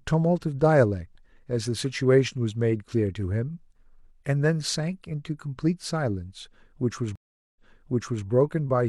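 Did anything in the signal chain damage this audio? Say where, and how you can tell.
Yes, a stream reconnect from 7.16 to 8.26 s, at the network stage. The speech drops into 0.40 s of silence, then resumes 0.70 s earlier than where it broke off. The player lost the connection, reconnected, and the server resent a burst from behind the break point.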